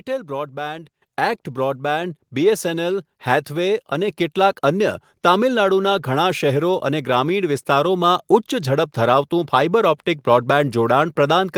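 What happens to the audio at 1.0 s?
At 1.02 s the speech and background jump up together by about 7 dB: the microphone volume stepped up when the call software raised the device's input level in one step.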